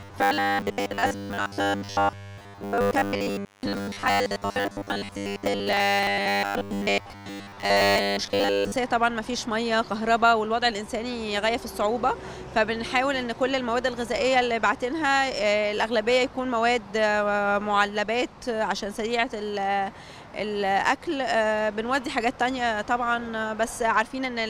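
From 0.01 to 8.76 s the audio takes on a robotic sound from repeated short buffers: a rigid, metallic buzz fixed at 100 Hz. This is likely a short segment, about 10 ms, replayed in place of most of the missing audio. Unlike dropouts, the audio never falls silent.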